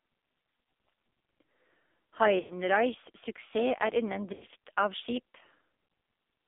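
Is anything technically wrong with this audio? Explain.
Yes. The speech has passed through an AMR narrowband mobile codec and also has three short dropouts from lost AMR speech frames.

AMR narrowband mobile codec, throughout: the band runs only from about 250 Hz to 3.6 kHz. The codec rebuilds the voice from a vocal-tract filter excited by sparse pulses. The codec damage is heavy, which points to one of the lowest AMR-NB modes, around 6 kbps, so the voice sounds buzzy, thin and synthetic.

Lost AMR speech frames at 2.40–2.54 s, 4.34–4.45 s and 5.86–5.90 s, covering about 100 ms, 80 ms and 40 ms of audio: frames corrupted on the radio link were discarded. The decoder kept repeating the last good pitch and filter settings at falling gain. Each gap sounds like a smeared, droning stretch that sags toward silence, and the voice returns weak or rough for a moment after it.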